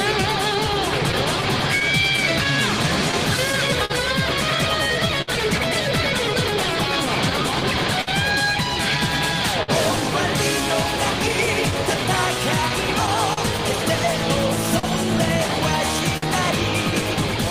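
Clock drift between sender and receiver runs through the whole clip. The sender's clock is running about 3% slow, so the jitter buffer keeps draining and the receiver keeps stretching short pieces. The result is unevenly spaced timing hiccups, with slightly elongated stretches in the waveform envelope.

From 1.12 to 3.92 s come scattered short gaps, about ten of them, the longest around 40 ms. Each lost or late packet is patched by continuing the previous sound, which leaves small ticks and smears. On a spectrogram they show as brief, flattened columns where the harmonics freeze for a moment.

At 5.22 to 5.29 s there is a short stall from a late packet. The buffer ran empty and the last sound was held for 59 ms until the packet arrived. It is heard as a slightly buzzy sustain, and a spectrogram shows a horizontally smeared band with no fresh onsets.

Between 7.29 and 8.09 s the audio stutters with repeated stalls: three separate waits totalling 74 ms, the longest 54 ms. 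Each time, the last sound is continued and faded in the longer wait, so playback drags. The waveform shows small amplitude dips between the repeated stretches.

Further single stalls of the same kind follow at 9.63 to 9.70 s (52 ms held), 14.79 to 14.85 s (40 ms) and 16.17 to 16.24 s (52 ms). Each is a brief frozen sustain, with a short dip in the waveform before the audio resumes.

A second run of scattered short gaps falls between 11.46 and 13.39 s: about seven concealed holes, none longer than roughly 40 ms. They are heard as light ticks and momentary smearing, and appear as thin vertical streaks of repeated spectral content.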